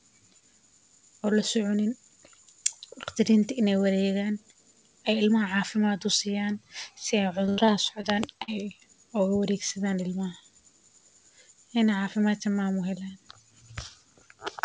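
Repeated packet loss (robotic sound) runs from 7.46 to 8.05 s, just before "daan ay uga wareegsadaan". Four separate gaps, the longest 80 ms, were bridged by stretching the preceding sound, so about 22% of that stretch is synthetic. The speech turns choppy and mechanical, with fragments dropped out.

Short concealed packet loss follows at 8.43 to 8.50 s, right before "ay uga wareegsadaan ilmaha". About 40 ms of audio failed to arrive in time, and the receiver extrapolated the last sound across the hole before rejoining the real signal, leaving a brief smear. Both events sit within a band-limited call path with nothing above 8 kHz, which fits G.722 at 64 kbps.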